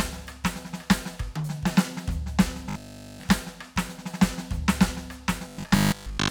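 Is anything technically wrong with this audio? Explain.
Yes. From 2.70 to 3.24 s and 5.48 to 6.30 s the music turns into a rigid 50 Hz buzz: robotic sound, likely from repeating a 20 ms buffer, entirely in the first stretch and mostly in the second.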